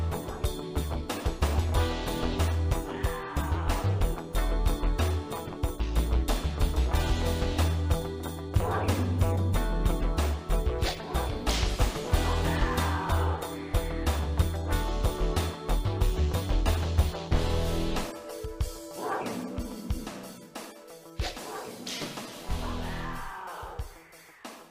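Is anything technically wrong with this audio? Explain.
No, the signal holds steady throughout with no audible technical faults anywhere in the recording.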